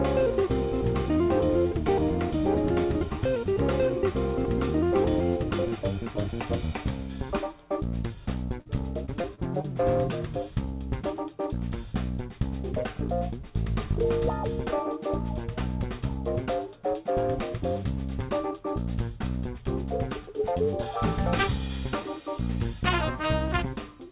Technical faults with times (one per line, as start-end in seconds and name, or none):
8.60-8.67 burst of packet loss
9.05-9.65 repeated packet loss (robotic sound)